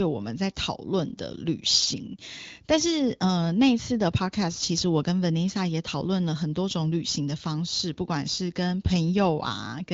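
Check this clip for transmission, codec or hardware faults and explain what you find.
Nothing stood out on listening to this clip.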